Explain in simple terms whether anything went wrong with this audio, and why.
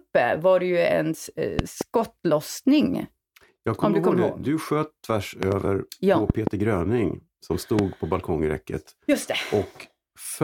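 Something went wrong: there are loud pops. Two quick pops come at 1.59 to 1.83 s, at 5.43 to 5.54 s, and at 6.30 to 6.49 s. A single pop comes at 7.79 to 7.81 s. Each is much louder than the speech, which carries on underneath. A sudden electrical jolt, likely from a plug, a switch or static, caused them.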